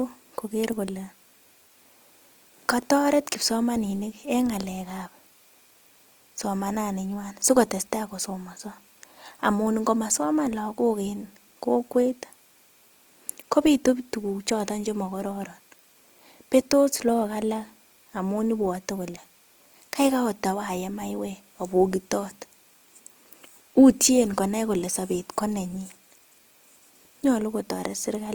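Throughout, the speech sounds rough and grainy, with a noisy edge, though the band still reaches 20.3 kHz. This is likely Opus compression in its music mode, at a rate fitting 24 kbps, filling bit-starved bands with folded or noise content.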